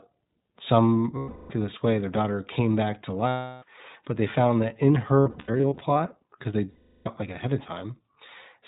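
Speech that sounds clear but slightly rough and synthetic, with a hard top end where nothing above 4 kHz comes through. That is the iLBC codec, a narrowband VoIP coder that codes the excitation of each frame on its own. The damage is plainly audible and fits the 15.2 kbps, 20 ms frame mode. In four places the sound turns into a held, faintly buzzy, breathy vowel before snapping back to normal. These are lost iLBC frames, where the decoder repeats the last pitch cycle mixed with noise to fill the missing packets. The first runs from 1.18 to 1.52 s and lasts about 320 ms. The second comes after "daughter came back to", from 3.28 to 3.64 s. The third lies between "they found that in" and "because they", from 5.21 to 6.01 s, where roughly 400 ms of loss is scattered over 800 ms in short bursts of up to around 70 ms. The fourth falls between "because they" and "like ahead of", from 6.70 to 7.08 s.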